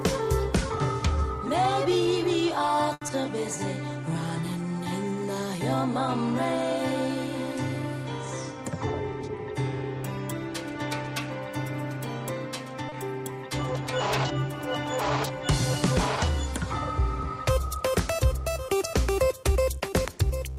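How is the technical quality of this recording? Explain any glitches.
The recording has three brief network glitches, all within the first thirteen seconds.

From 2.93 to 3.03 s there is a short stall from a late packet. The jitter buffer ran dry, so the last sound is held for 80 ms, then resumes without loss.

Two short concealed packet losses follow. At 3.07 to 3.10 s, about 20 ms never arrived, and the gap was papered over with a brief continuation. At 12.89 to 12.94 s, 40 ms went missing. Each is heard as a quick smear or wobble.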